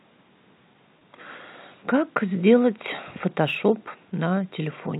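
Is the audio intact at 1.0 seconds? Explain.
No. Audio data went missing from 0.99 to 1.01 s, a 20 ms gap that fits two lost 10 ms packets. The receiver bridged it by repeating the last pitch period, so the speech briefly holds a slightly buzzy, sustained tone before resuming.

Across the whole clip, including this moment, the sample clock jitter of roughly 2 µs makes samples land slightly early or late. The resulting error, about 40 dB below the signal, adds a faint hiss and roughness that grows on loud, bright passages.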